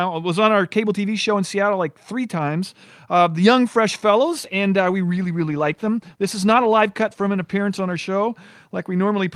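Speech with a call bitrate drop from 4.19 to 8.05 s. The encoder's bit budget falls, so the sound turns coarse, watery and muffled, which fits a fall from 64 to 19 kbps. Unlike packet loss, there are no gaps or glitches, only a steady dulling until clarity returns.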